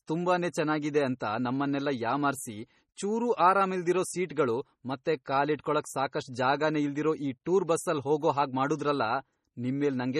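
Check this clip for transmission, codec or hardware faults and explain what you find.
One fault runs throughout: likely MP3 compression, its heavy damage fitting about 32 kbps. Weak bands drop out frame to frame, sounding watery; spectrograms show flickering holes and nothing above 14.1 kHz.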